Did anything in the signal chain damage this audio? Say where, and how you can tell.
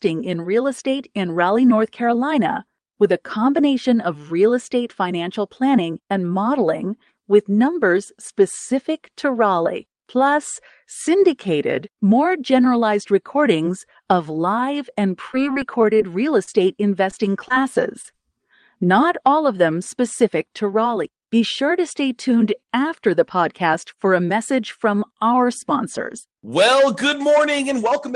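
Yes. The first fault is a jitter buffer slow-down at the network receiver. It runs from 14.74 to 15.95 s, just after "more generalized recordings of". Speech there plays at about 97% speed, with pitch unchanged. Sounds are slightly drawn out. The receiver's buffer was short of data, so it repeated single pitch periods and slices of pause to build a reserve. That added 39 ms across the stretch.

The second fault is scattered short gaps, also from the network, between 14.94 and 18.23 s. About fifteen packets went missing or arrived late, one at a time, totalling 220 ms. The receiver covered each hole by extending the preceding sound. You hear brief ticks, smears and hiccups rather than silences. No single gap lasts much beyond 30 ms. Roughly 7% of that span is concealed audio.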